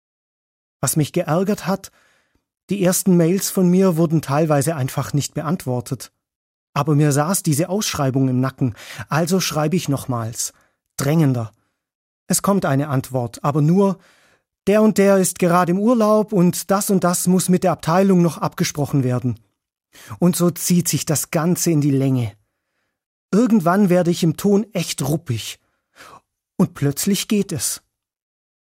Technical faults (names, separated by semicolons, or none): none